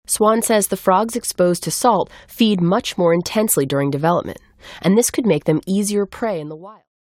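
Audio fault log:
No faults turn up anywhere in this speech clip. Toward the end the level eases down in a smooth fade out, beginning around 5.5 s and reaching silence at 6.9 s with no click or hard edge.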